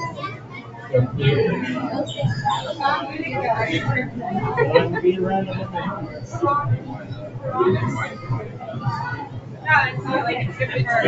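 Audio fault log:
Throughout: noise suppressor applied to music or sounds. A suppressor tuned for speech stayed active on this material and kept treating sustained, steady content as noise, pulling its gain down and letting it back up again, with level swings of around 10 dB. Onsets pass largely intact while held portions and decaying tails get pushed under, so the sound pumps and thins. The call path's band limit leaves nothing above 8 kHz.
0.1–0.93 s, 6.0–6.38 s, 6.78–7.43 s, 8.09–8.64 s, 9.26–9.66 s: sound cut by the noise suppressor. In each of these spans the suppressor misjudged the steady or fading part of the sound as background and attenuated it harder than its surroundings, by about 7 to 8 dB at the deepest point. The result is audible sagging of sustained sound and tails that die away early, while any sharp attacks inside these windows come through at close to full level.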